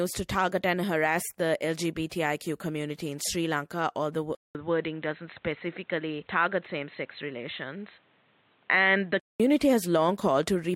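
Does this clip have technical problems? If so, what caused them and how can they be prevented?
Yes. A corrupt frame decoded at 3.2 s: damaged bits in roughly two compressed frames were still played, so misread codes dropped a brief spurt of energy into the wrong frequencies, peaking around -35 dBFS and lasting only about as long as those frames. Preventing it means having the decoder check each frame's integrity and conceal failed frames by repeating or fading the previous good one.

Input switched to a poorer device from 4.35 s to 9.40 s: after a 200 ms silence at the switch, the speech loses everything above 4.1 kHz and turns dull and boxy, with a new background noise floor about 40 dB below the voice and no obvious change in level, until fuller sound returns at 9.40 s. The likely cause is the recording changing inputs, to another microphone or a headset's call profile, mid-session. Locking the input device before recording starts prevents it.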